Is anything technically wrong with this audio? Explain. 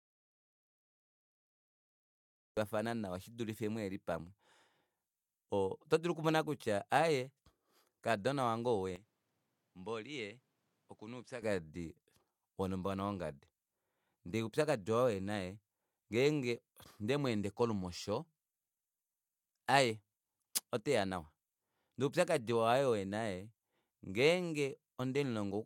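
Yes, there are two faults. The clip opens in an audio dropout to silence, already under way, running to 2.57 s, when the speech enters mid-flow with "nawa shidulife muheli pamwe". The input was likely lost while recording continued. Unlike a natural pause, the gap carries no room tone at all.

From 8.96 to 11.42 s, the input is switched to a poorer device, likely another microphone. The speech turns duller, with nothing above 11.1 kHz, drops roughly 10 dB and gains its own noise floor, around 40 dB below the speech. There is no gap at the switch. That shift in noise and level, together with the narrower band, separates it from a filter alone.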